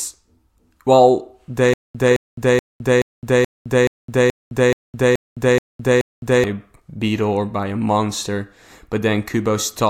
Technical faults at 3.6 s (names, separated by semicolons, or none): stutter with silent gaps